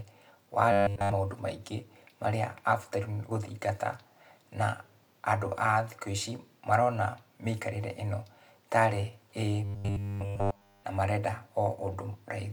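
Audio likely arrived too seldom, so a 10 ms buffer was replayed over and over, imposing a rigid 100 Hz buzz. This robotic sound from repeated short buffers turns the speech metallic from 0.72 to 1.12 s, before "maũndũ maingĩ marĩa", and again from 9.65 to 10.84 s, before "na marenda".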